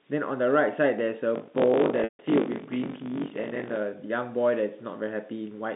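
Speech heard over a G.711 telephone line, band-limited to roughly 150 Hz to 3.7 kHz, carries two faults. From 1.34 to 3.76 s, buffer tearing occurs: the writer and the hardware reader of the ring buffer have drifted, so roughly a fifth of each buffer replays audio from around 40 ms earlier. The hard joins produce a steady robotic buzz at 50 Hz, the buffer rate. From 2.04 to 2.19 s, packet loss with pitch repetition wipes out 150 ms of audio, which fits about five 30 ms packets. The receiver loops the last pitch period, so the sound briefly holds and buzzes, then fades to silence within about 50 ms before returning through a short cross-fade.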